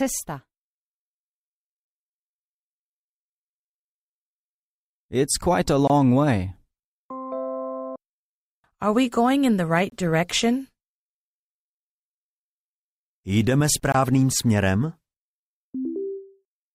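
The audio was delivered in 4.0 s chunks, and each join received about 23 ms of inserted silence. That duration fits a 1024-sample frame of codec padding at 44.1 kHz. This gap between chunks appears at 5.88–5.90 s, 9.90–9.92 s and 13.92–13.94 s. No material is lost, but the sound stops abruptly and resumes at each join. The result is a brief hard-edged hole that recurs every four seconds.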